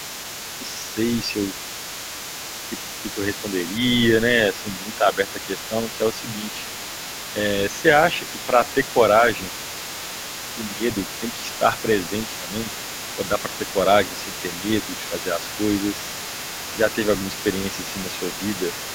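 Other side's voice leaking through runs from 0.0 to 18.95 s: a second voice sits under the speech at roughly 15 dB below it. The likely cause is loudspeaker playback reaching the microphone, with the echo canceller failing to remove all of it.

Speech suppressed in double talk occurs at 1.52 s, 4.63 to 6.46 s, 8.2 to 8.95 s, 10.75 to 11.22 s and 12.42 to 15.38 s. The speech dips by about 5 dB in brief patches. The likely cause is the echo canceller turning everything down while both sides overlapped.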